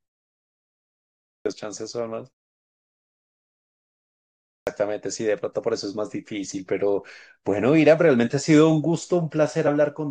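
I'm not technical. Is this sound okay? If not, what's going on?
No. There are two kinds of problem.

The first is a clipped start after a pause. At 1.21 s and again at 4.4 s, the speech begins abruptly, with its opening sounds missing. About a quarter of a second is lost each time, 0.25 s and then 0.27 s. Both follow a pause, one of 1.2 s and one of about 2.2 s. The playback device likely dozes off during silence. It needs a moment to wake up, and the start of the next sound is swallowed.

The second is damaged data in a compressed stream. At 9.66 s there is a very short blip or chirp. Part of the stored audio was wrong at that spot. The player could not read it properly. It lost its place briefly and then picked up again.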